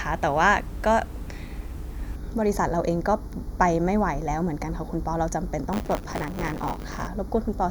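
From 2.16 s to the end, channel delay (comb filtering) makes the speech hollow: one channel lags a fraction of a millisecond, carving fixed notches from around 3 kHz, unlike a sweeping phaser. From 5.72 to 7.08 s, buffer tearing adds a robotic 100 Hz rattle. A small slice of each buffer repeats audio from about 20 ms earlier. Unlike mains hum, the rattle is present only with signal.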